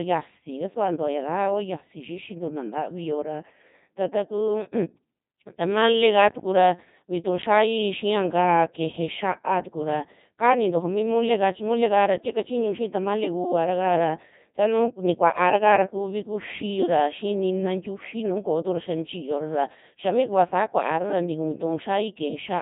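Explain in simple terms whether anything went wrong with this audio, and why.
Something did go wrong, and it lasts the whole clip. The speech has passed through a Codec 2 vocoder, a very low-rate codec built for digital radio. It does not keep the real sound wave. It sends only a few facts about the voice, such as pitch and loudness. The receiver then rebuilds the voice from simple tones. That is why the speech here sounds heavily robotic and buzzy from start to finish.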